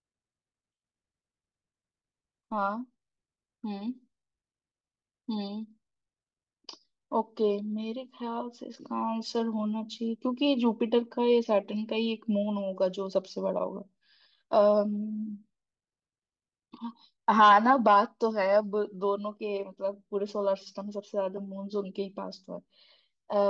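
No technical faults can be heard anywhere in this speech recording; the signal stays steady and intact throughout.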